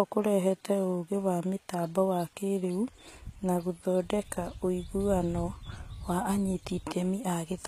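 From start to finish the speech carries plainly audible coding damage, most likely HE-AAC compression at a low bitrate, with the sound pointing to around 20 kbps. The treble sounds bright but synthetic: s sounds turn gritty and metallic, because upper bands are rebuilt from copied lower ones rather than coded. Nothing reaches above about 14.9 kHz. Unlike a plain low-pass or narrowband MP3, the top end is present yet grainy, not simply dull.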